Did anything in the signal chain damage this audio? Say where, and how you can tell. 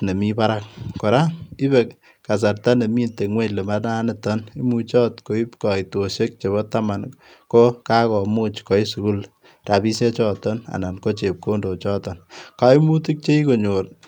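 No, nothing damaged this audio.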